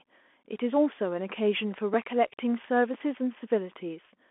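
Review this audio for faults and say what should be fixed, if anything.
The speech throughout has the narrowband sound of a Bluetooth CVSD headset codec. Nothing is present above about 3.8 kHz, and the usable band sits roughly between 250 Hz and 3.4 kHz, which points to the 64 kbps CVSD link. CVSD codes one bit per sample as up or down with an adapting step. Loud high-frequency content outruns the step, so s sounds turn scratchy and a granular hiss sits under the speech. The damage is plainly audible. Prevent it by recording through a wideband path such as a wired microphone or a headset using a wideband speech profile rather than the CVSD headset link.

Two blocks of digital silence cut into the speech. The first is a single brief dropout at 1.94 s, about 2.3 ms long. The second runs from 2.94 to 2.95 s, about 5.3 ms long, which fits a 128-sample buffer. In each case a block of samples was replaced by zeros, most likely because the output buffer was not filled in time. 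The signal drops to digital silence and returns with no fade, and each gap is heard as a short tick. Prevent it by enlarging the audio buffer or raising the priority of the audio thread so every block is delivered before its deadline.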